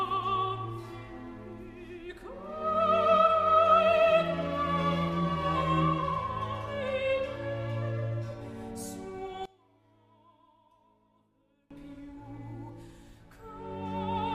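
From 9.46 to 11.71 s the sound collapses by about 26 dB, leaving only a faint residue of the stereo difference. The likely cause is one channel inverted: with one side's polarity reversed, the material common to both channels cancels when they are summed to mono.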